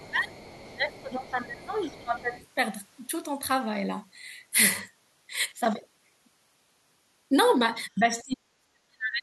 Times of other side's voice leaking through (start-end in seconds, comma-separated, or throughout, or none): 0.00-1.31, 1.62-2.47